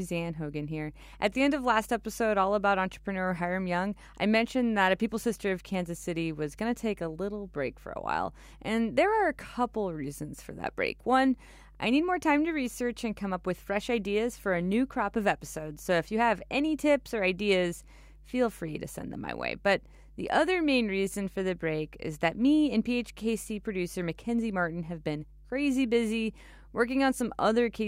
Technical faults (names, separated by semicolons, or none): mains hum